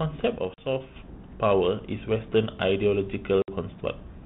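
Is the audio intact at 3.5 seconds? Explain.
No: packet loss on this G.726 ADPCM call silences 3.42 to 3.49 s, about three packets. Unlike a plain dropout, the audio returns slightly distorted as the out-of-step predictor resettles.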